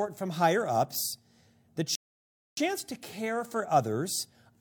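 At 1.95 s, after "from higher ups the", a rebuffering stall: playback starved, went silent for 0.62 s, then resumed intact at "to care".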